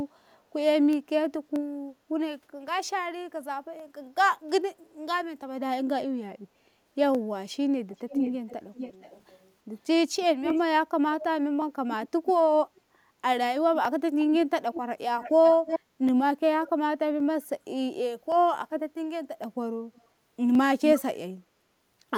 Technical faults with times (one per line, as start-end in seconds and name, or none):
0.44-21.67 clock drift buffer slips
7.89-9.51 echo leak
10.43-10.60 echo leak
11.92-12.09 echo leak
14.40-15.80 echo leak
15.83-15.94 background gated by the echo canceller
16.64-16.70 echo leak
19.95-20.02 echo leak